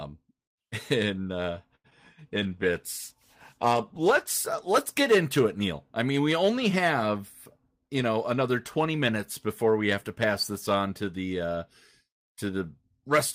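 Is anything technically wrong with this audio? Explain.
Yes. There are four distinct faults, all typical of a VoIP call path under unstable network conditions.

From 1.75 to 1.86 s, right after "in uh", there is a short stall from a late packet. The jitter buffer ran dry because a packet had not arrived on time, so the receiver extended the last sound for 88 ms until it did, then resumed where it left off. Nothing is lost, but the sound hangs unnaturally long with a faint buzzy quality, and playback ends up 88 ms later than before.

Between 1.90 and 1.93 s comes a short concealed packet loss. About 20 ms of audio never reached the decoder in time, and the receiver patched the gap by extrapolating from the preceding sound before crossfading back into real audio. The result is a brief smear or wobble, and a fragment of the sound there is simply missing.

From 2.34 to 4.44 s, leading into "uh let's get into", there is a call bitrate drop. 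The bandwidth estimate fell and the encoder was pushed from 32 kbps down to 15 kbps, holding at that floor for about 2 s. Coarser coding at that rate makes the sound rougher and more watery, with high-frequency content trimmed, until the rate recovers.

From 7.64 to 8.94 s, between "mean we only have" and "minutes before we have", there is a jitter buffer speed-up. The buffer was holding more audio than its target, so the receiver repeatedly cut out pitch-period-length slices, removing about a tenth of a second in total. Playback runs at 107% speed with the pitch unchanged, so this stretch sounds slightly hurried.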